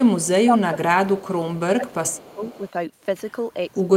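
Echo leak appears from 0.19 to 0.28 s, 1.25 to 1.32 s and 2.24 to 2.71 s: a faint copy delayed 462 ms, about 25 to 30 dB down, likely from incomplete echo cancellation. Speech suppressed in double talk spans 0.31 to 1.61 s and 1.77 to 2.40 s, with the speech dipping roughly 20 dB and then 15 dB, likely because the canceller attenuated both talkers during overlap.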